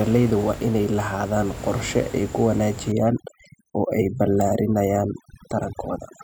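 From 2.92 s to the end, right after "lahaadaan qorshe ay ku", the speech suffers overdone noise removal. A noise reducer set far too strong treats any band near its noise estimate as noise and pulls it down hard or off. Quiet parts of the voice fall below that line too. The background drops and breaks up into twinkling specks. The room noise before this sits about 14 dB below the speech.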